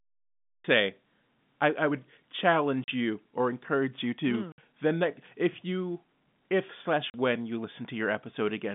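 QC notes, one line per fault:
0.00–0.64 s, cut-off start: digital silence, then sound begins mid-stream at 0.64 s with no natural attack. A late start rather than a fade-in or gate.
2.84–2.88 s, 4.52–4.58 s, 7.10–7.14 s, packet loss filled with silence: gaps of 40, 60 and 40 ms, fitting 20 ms packets, before "you or encourage you", between "or encourage you to" and "then that if you", and between "if you if slash" and "when you". Hard-edged true silence, not concealment's smeared repeats.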